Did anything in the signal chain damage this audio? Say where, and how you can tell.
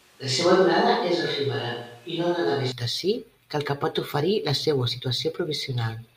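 Yes. From the very start of the clip until 2.72 s, the speech sounds roomy and hollow, with thin low end and a room-noise floor about 35 dB below the speech. At 2.72 s it snaps abruptly to a close, full sound at much the same level. This is a switch to a distant microphone at the capture stage, most likely a failed or unselected close mic leaving a farther pickup that hears more room reflection than direct sound.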